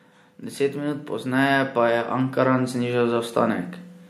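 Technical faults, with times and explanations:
0.56–3.66 s, automatic gain rising: the automatic gain control treated the input as too quiet and raised its gain slowly by about 7 dB over roughly three seconds, so the speech and the background noise swell together rather than the level jumping.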